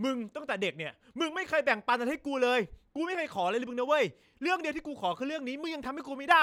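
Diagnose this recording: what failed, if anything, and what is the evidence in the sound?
No fault detected in this recording.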